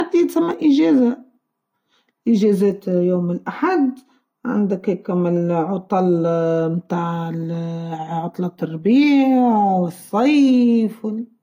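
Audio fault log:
Throughout: low-bitrate audio saved at a high bitrate. The speech has the smeared, swirly texture of heavy compression and nothing above about 16.5 kHz, yet the file sits at a generous bitrate. That mismatch likely means an earlier low-rate encode, something in the region of a 40 kbit/s Vorbis pass, was re-saved as high-rate MP3. The second encode keeps the first one's damage and cut-off intact but can't put back what was thrown away.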